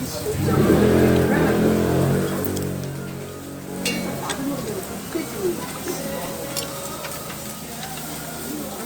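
An everyday-sound recording with one repeated buffer at 6.26 s. New audio failed to reach the output in time. The device replayed its last block once more instead. That block lasts about 2.9 ms, which fits a 128-sample buffer. A repeat that short cannot be heard as a stutter. It comes across as a click or brief buzz, with a hard join at each edge. A few milliseconds of audio are lost.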